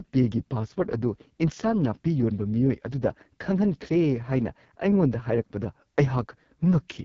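AMR wideband (HD Voice) codec damage throughout: rough, raspy speech with nothing above 7.2 kHz, which fits the lowest 6.6 kbit/s mode, where the vocal tract model is starved of bits.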